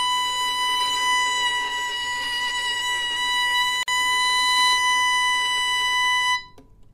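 At 3.83 s a gap at a join of encoded pieces opens a silence of about 49 ms, ending at 3.88 s. Separately encoded segments were spliced without trimming the encoder delay and end padding. Unlike a dropout, nothing is lost: the smeared edges bracket silence, and the sound resumes exactly where it stopped.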